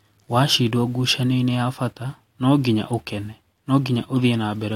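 No technical faults are audible anywhere in this speech recording.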